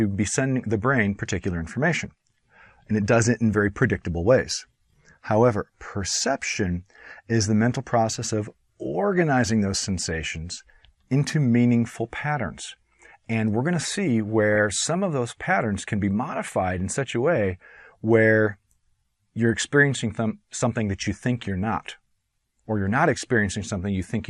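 Throughout the audio the top end is dull and the remaining content has a gurgling, granular roughness, with upper bands appearing to flicker in and out. This plainly audible damage is likely MP2 compression at a low bitrate: MPEG Layer II divides the signal into 32 sub-bands, and with a budget that fits roughly 80 kbps the upper bands get no bits at all while the lower ones are quantised coarsely. From 14.53 to 14.58 s there is a brief burst of DAB burbling, short blips of noise in single sub-bands. The pattern points to reception bit errors, at a rate of well under one percent, getting past error correction and corrupting sample values in four MP2 frames. Each corrupted frame briefly decodes with wrong values in some sub-bands, producing the blips.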